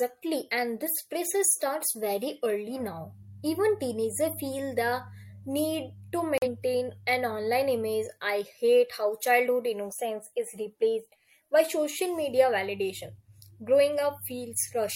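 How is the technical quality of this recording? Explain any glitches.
The recording has one clear glitch in the speech. From 6.38 to 6.48 s the sound drops abruptly to dead silence for 100 ms, then resumes on time. This is a corrupt frame muted: damaged compressed data was rejected by the decoder and replaced with silence, a gap that fits two lost frames.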